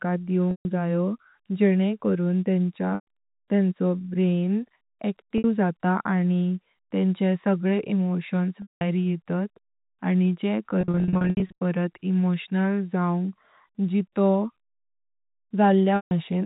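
Packet loss with pitch repetition at 0.51, 2.95, 5.38 (before "जात आनी तेंचे सगळे"), 8.62 (before "येतात आनी जेने"), 10.81 to 11.52 (scattered losses) and 15.96 s. The receiver loops the last pitch period, so gaps of 60 to 190 ms sound held and buzzy before fading, over G.711 telephone band limiting.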